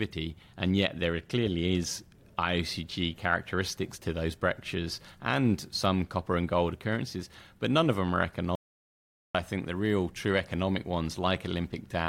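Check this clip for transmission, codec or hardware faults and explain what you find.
One fault stands out: an audio dropout to silence from 8.55 s to 9.35 s. Right after "none of them are" the speech stops dead, leaving about 0.79 s of complete silence with no room tone, and it resumes abruptly at "I think the real". The cause is likely a momentary loss of the input signal, such as a disconnected device, a failed link or a stray mute, while recording carried on writing silence, so whatever was said in that gap is gone.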